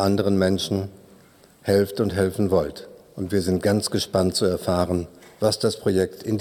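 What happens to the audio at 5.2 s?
Nothing goes wrong at 5.2 s; the audio plays through that moment intact.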